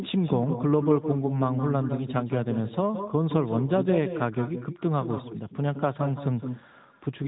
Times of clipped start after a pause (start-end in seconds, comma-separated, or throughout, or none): none